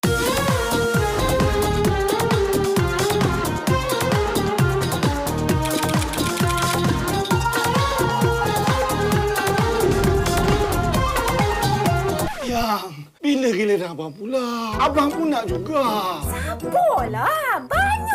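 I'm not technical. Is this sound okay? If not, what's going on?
Yes, it sounds fine; nothing is going wrong here.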